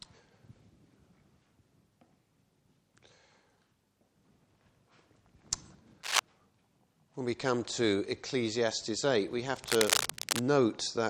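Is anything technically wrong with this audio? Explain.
Yes. Cable scratch noise appears twice, from 6.03 to 6.19 s and again, longer, from 9.56 to 10.43 s. Each time a dense, irregular crackling and rustling sits over the sound at roughly the same level as the sound itself. The likely cause is a worn cable, connector or control being moved, so that its contact resistance fluctuates rapidly and injects uneven bursts of noise into the signal path for as long as it is disturbed.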